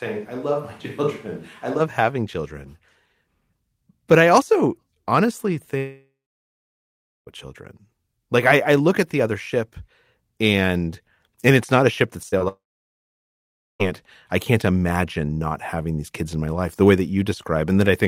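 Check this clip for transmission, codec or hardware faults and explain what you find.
There are three kinds of trouble in this speech clip: a distant-mic stretch at the start, two long dropouts and a pair of short concealed losses.

From the start to 1.79 s, just before "having children", the sound is hollow and roomy, about 5 dB quieter, with room noise around 30 dB down. It's likely a switch to a distant microphone.

At 5.77–7.29 s and 12.48–13.82 s (the second ending right before "I can't imagine not"), the sound smears briefly and then goes silent for roughly a second. That's likely a long network dropout: the receiver stretched the last sound, gave up, and the lost audio never returns.

At 12.29–12.34 s and 12.38–12.42 s, the second right after "not a ship that", there are quick smeary wobbles. This is short concealed packet loss, where the decoder patched 20–40 ms holes by extrapolating the preceding sound.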